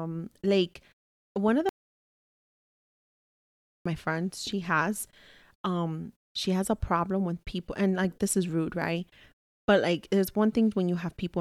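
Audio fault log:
1.69–3.86 s: audio dropout to silence after "like one of", about 2.16 s of silence, no room tone, before "my friends she has"; likely a lost input.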